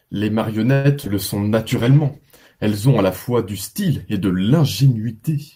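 At 0.73 s the speech stops moving forward and the last sound is drawn out as a fading buzz or hiss for about 0.11 s, until 0.86 s, never dropping to full silence. This is likely a call audio freeze, with packets held up in transit and the jitter buffer running dry. Unlike packet loss, nothing is missing: when delivery resumes, the speech carries on from exactly where it stopped, so a roughly 109 ms gap has been inserted and everything after it runs that much later.

Two short concealed packet losses follow back to back, from 1.04 to 1.08 s and from 1.08 to 1.11 s. Each lost 20 ms of audio that never reached the decoder in time. The receiver covered the holes by extending the preceding sound and blending back into real audio. The result is a brief smear or wobble rather than a stall, and the timing does not shift, because the missing audio is replaced and not waited for.

From 1.54 s to 2.92 s, ending just before "ont à la fois", a call bitrate drop takes the encoder from 40 kbps down to 14 kbps, where it stays for about 1.3 s. 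At that rate Opus codes coarsely and trims the upper frequencies, so the speech turns rough and muffled across the whole stretch. That steady, sustained dulling sets it apart from the brief local glitches of packet loss.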